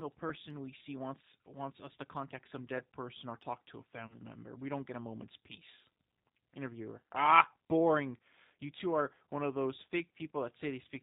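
Throughout the clip the speech carries the sound of the G.729 codec, which fits its 8 kbit/s mode. The voice is rebuilt from a filter and pitch model with sparse pulses, so the damage is plainly audible: slightly rough, synthetic, with no content above 4 kHz.

From 4.07 to 4.19 s there is VoIP packet loss concealed by the speech codec. The gap fits roughly three lost frames, about 30 ms. The decoder extends its last pitch and filter into a fading buzzy tone or coloured noise, and the voice stays weakened briefly afterwards.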